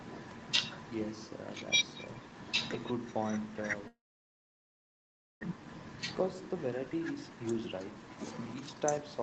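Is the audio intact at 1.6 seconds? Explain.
Yes, at 1.6 s the speech is intact, with no dropout, glitch or distortion, only the ordinary band limit near 8 kHz from the call path.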